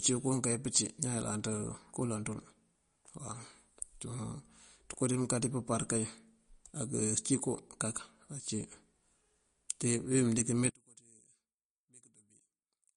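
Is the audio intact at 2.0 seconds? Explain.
No. At 2.0 seconds the speech carries MP3 compression damage, which runs through the whole clip. Nothing is heard above 10.6 kHz. Starved of bits, the encoder likely cut the treble and dropped weak detail, which fits about 40 kbps. The speech sounds watery and smeared.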